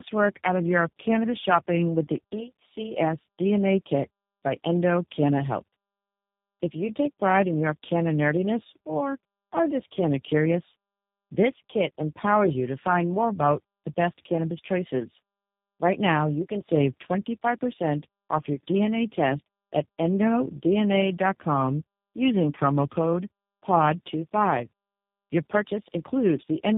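Throughout, the call was decoded and re-encoded across three low-rate speech codecs in a row, which fits a chain ending in G.729A. This is tandem speech coding, with each stage compounding the last, leaving speech rough, muffled and warbly, with nothing above 3.8 kHz.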